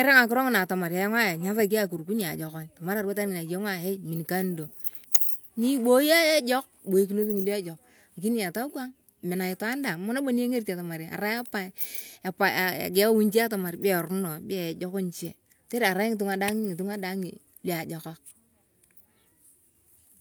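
No technical faults can be heard anywhere in the recording, and the signal stays steady from its first moment to its last.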